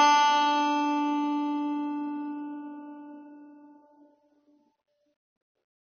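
From start to finish, the music has likely been through AAC compression at a very low bitrate, one that fits 24 kbps AAC-LC, starving the quantiser of bits. Everything above 6.4 kHz is gone, leaving the sound dull and smeared, with plainly audible warbling, fizzy artefacts.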